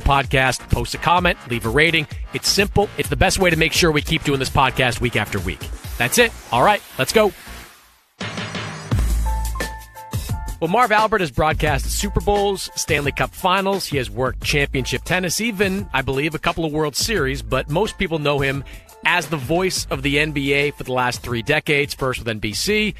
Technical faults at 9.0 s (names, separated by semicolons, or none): overlap between stream segments